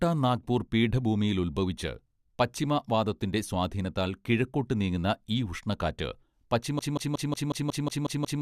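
At 6.79 s the speech falls into a broken-record loop: a 0.18 s fragment repeats exactly, back to back, nine times right through to the end. Most likely the player or stream stalled and kept resending its last chunk, so whatever followed is gone.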